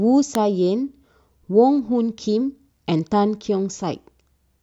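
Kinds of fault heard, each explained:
Electrical switching spike: A single sharp snap lands on top of the speech at about 0.35 s. It lasts only a millisecond or so, peaking at about -5 dBFS. Its abrupt, dry edge has nothing to do with the talker. The likely cause is a brief arc from a nearby switch, motor or static discharge that the audio line picked up as a momentary voltage burst.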